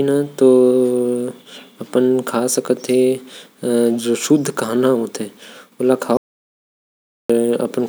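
The input was likely lost, through a dropped link, a disconnected device or an accidental mute, while the recorder kept writing zeros. The result is an audio dropout to silence from 6.17 to 7.30 s: the speech cuts off abruptly, and about 1.13 s of dead digital silence with no room tone follows before it resumes.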